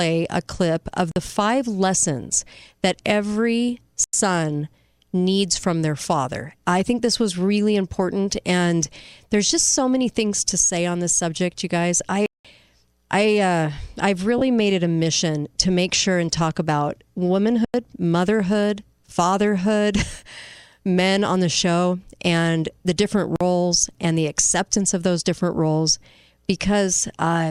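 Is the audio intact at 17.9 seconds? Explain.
No. At 17.9 s there is a brief dropout of lost LE Audio frames, about 15 ms of missing signal, which fits two 7.5 ms LC3 frames. The LC3 decoder filled the gap by repeating the last received spectrum with randomised phase signs. Over so short a gap there is no time for the fade toward silence, so the speech briefly turns into a noisy, smeared blip in place of clean harmonic content.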